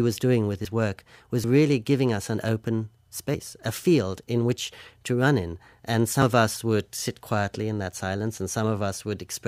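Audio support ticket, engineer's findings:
Four forward jumps in the speech, no gap of silence: 0.65 s just after "was doing with", 1.44 s right before "really giving us an", 3.34 s between "giving us an open" and "a field in which", and 6.22 s. Likely a dropped buffer (overrun) in the capture path: samples overwritten before being read, so the edges join directly. The first three skip about 50 ms each; the one at 6.22 s skips about a tenth of a second.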